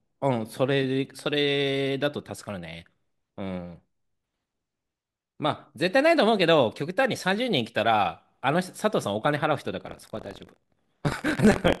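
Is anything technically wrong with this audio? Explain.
Yes, buffer tearing from 9.85 s to the end: writer and reader slipped, so a small slice of each 1024-sample buffer replays audio about 50 ms old, giving a 43.1 Hz robotic buzz under the speech.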